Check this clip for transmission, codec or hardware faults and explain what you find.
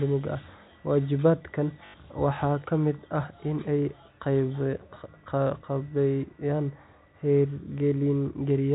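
One transmission fault is audible, a single dropout concealed by repetition, heard over telephone-band G.711 audio that stops at 4 kHz.

Packet loss with last packet repeated, 1.86 to 1.94 s: about 80 ms of audio went missing, which fits four 20 ms packets, and the receiver replayed the final good packet to fill the gap. The repeats make the speech briefly stutter with a robotic buzz near 50 Hz.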